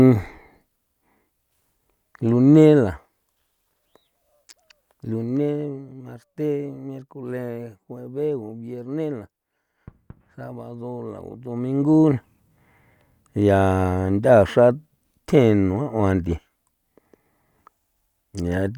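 A level change in this speech recording was applied in coarse steps with no smoothing between them, producing zipper noise from 11.18 to 12.2 s. Over that second the level shifts by roughly 10 dB in around a hundred discrete jumps per second, and each jump leaves a tiny click. The clicks run together into a fine ticking, zipping texture laid over the speech for as long as the level is moving.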